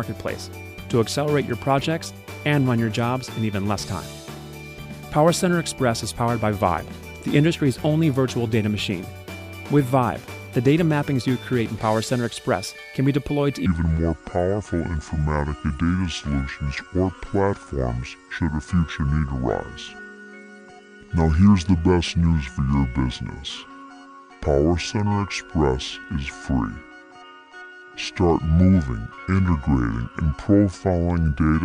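From 13.66 s onward the sound turns slow and deep, roughly seven semitones down: a section at the wrong speed, 0.622 times, likely from a mismatched clock.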